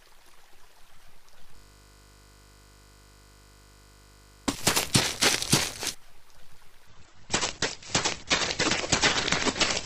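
At 1.56 s the sound locks into a system hang loop that lasts until 4.48 s. The playback system stalled while the audio hardware kept replaying the same stretch of its ring buffer, so a single 20 ms slice repeats exactly, about 146 times. Because the loop is so short, it is heard as a steady buzz at 50 Hz rather than a stutter. When playback resumes, roughly three seconds of audio are simply gone.

From 6.88 s to the end of the clip, the quality drops abruptly with no gap, as an adaptive stream switches to a lower-bitrate version. Nothing is left above 8.2 kHz, so the top end sounds dull, and coding artefacts become more prominent. The size of the drop suggests a step down from around 64 kbit/s to roughly 12 kbit/s, which fits a connection that slowed and forced the player onto a much leaner encode.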